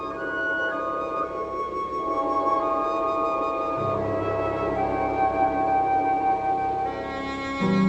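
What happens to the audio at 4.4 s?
Nothing goes wrong at 4.4 s; the audio plays through that moment intact, with no dropout, click or distortion.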